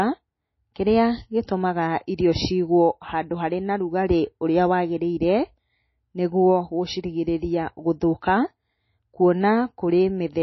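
Throughout the speech, nothing reaches above 5.8 kHz, and the sound is watery and swirly, likely from heavy MP3 compression at a very low bitrate, around 24 kbps. A spectrogram shows a hard ceiling at 5.8 kHz, with patchy blocks flickering beneath it.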